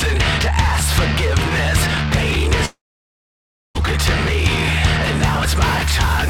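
At 2.65 s the audio breaks off and doesn't properly return until 3.77 s. For the first tenth of a second or so the last bit of sound is stretched into a fading buzzy smear, and then there's roughly a second of near-silence, about 0.97 s of it. When the sound picks up again it jumps ahead, skipping around 1.1 s of material. That pattern points to a likely long network dropout, with the receiver briefly masking the gap before going quiet.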